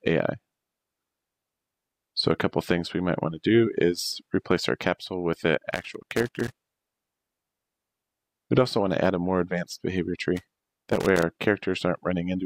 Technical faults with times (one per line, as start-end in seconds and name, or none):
5.71-7.32 loose connector crackle
10.36-11.23 loose connector crackle